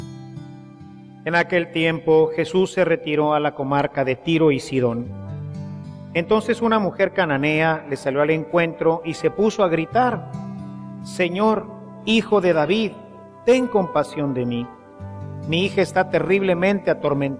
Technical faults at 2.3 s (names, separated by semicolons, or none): none